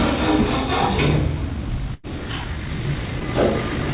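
A time-stretched section runs from 1.36 s to the end of this everyday-sound recording, at about 3.94 s. The pace jumps abruptly to 1.88 times normal speed while the pitch stays put, and the audio turns rushed. The likely cause is software squeezing that stretch to fit a shorter length and keeping the pitch by dropping short slices. A burst of packet loss hits from 1.94 s to 2.05 s. About 100 ms of audio never arrived in time, and the receiver filled roughly 94 ms by carrying the last sound forward and fading it down. What was tonal becomes a held buzz and the rest a dying hiss. The sound then picks up further along with the missing stretch simply gone. A short concealed packet loss follows at 3.20 to 3.26 s. Only about 20 ms failed to reach the decoder, and the receiver patched it with a 10 ms continuation of the preceding sound before blending back into the real audio. Together these leave a brief smear or wobble, and the timeline shifts by a few milliseconds. 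All of it passed through a call path with nothing above 4 kHz, which fits G.711 A-law at 64 kbps.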